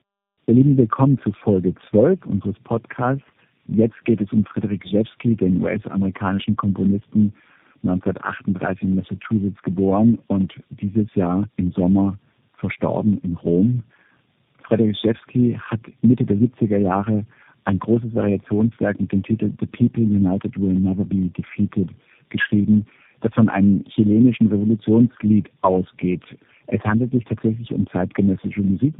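Tandem speech coding throughout: the speech passed through about four successive speech codecs, each re-encoding the last one's damage, leaving it rough, warbly and band-limited below 3.8 kHz.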